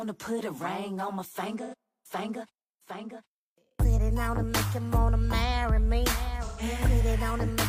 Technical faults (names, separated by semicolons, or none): AAC frame loss with concealment